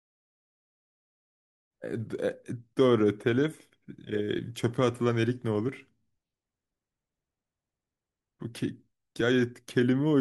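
No technical faults can be heard in this speech.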